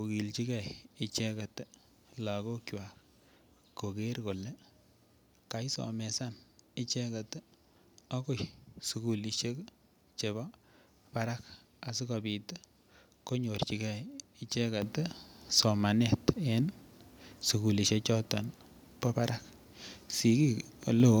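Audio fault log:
14.82 s and 21.0 s, microphone volume stepped up: the input level jumps in one step, by about 9 dB and then about 5 dB. The call software judged the mic too quiet and raised its input volume, so voice and background get louder together.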